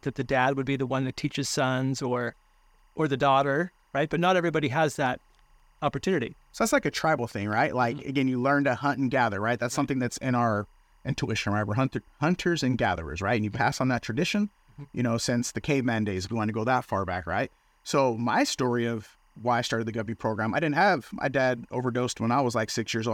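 Timecode bleed runs the whole way under the speech: a faint chirping warble between roughly 1 and 2 kHz, about 40 dB down, fitting 23.976 fps code leaking across.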